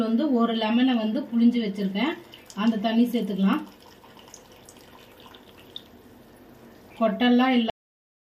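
The final buffers of the recording were never written or played out, leaving a cut-off end at 7.70 s. The sound stops abruptly mid-event with no natural decay and falls straight to digital silence, which lasts for the remaining 0.68 s.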